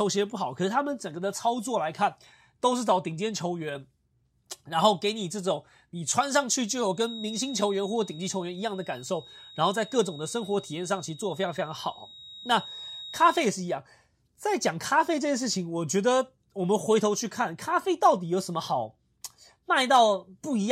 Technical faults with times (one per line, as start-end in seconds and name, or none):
6.91-13.49 feedback whistle